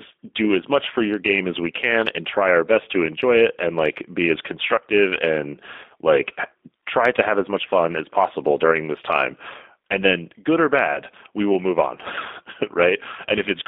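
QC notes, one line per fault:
throughout: G.729 codec. The speech is plainly rough and synthetic, confined to a line band of 250 Hz to 3.6 kHz. Each 10 ms frame is rebuilt from a vocal tract filter, pitch predictor and a few pulses, which fits 8 kbit/s G.729A.
10.94 to 10.99 s: VoIP packet loss concealed by the speech codec. About 20 ms of audio is missing, which fits a single lost packet. The decoder extends its last pitch and filter at falling gain. A short, fading stretch results, and the sound stays weak briefly afterwards.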